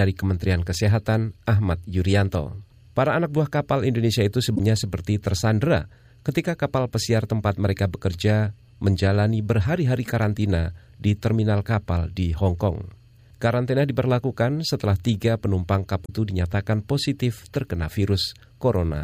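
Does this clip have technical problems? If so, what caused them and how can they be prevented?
Yes. Damaged data in a compressed stream is heard at 4.53 to 4.60 s and again at 16.02 to 16.10 s. Each is a brief blip of about 80 ms where the decoder hits corrupted frames, loses sync and hunts for the next valid frame header. Verifying files with checksums and using error-checked transfer and storage would prevent it.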